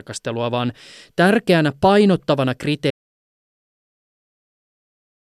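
Right after "vaan tärkeänä painottavana", at 2.91 s, the speech cuts off abruptly into silence, with no room tone, that lasts to the end of the clip. This audio dropout to silence likely came from the input being lost while silence kept being written.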